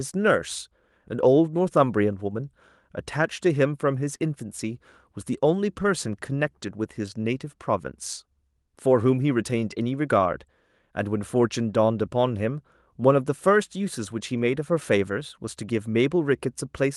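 No technical faults occur at any point in the audio, so there is nothing to describe in time order.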